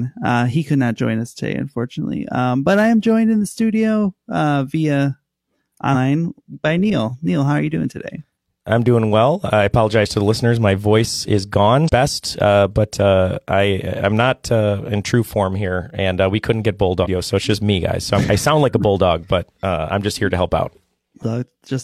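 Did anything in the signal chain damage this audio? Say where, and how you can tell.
Yes. The damage sits in the codec stage, as damaged data in a compressed stream. Four short glitches break the speech at 5.90–5.95 s, 11.85–11.90 s after "voice is", 17.00–17.07 s between "uh we couldn't get" and "so it's just me", and 21.18–21.23 s. Each lasts about 50 to 70 ms. Corrupted bytes make the decoder misread those frames. It loses sync and hunts for the next frame header, which produces the glitch.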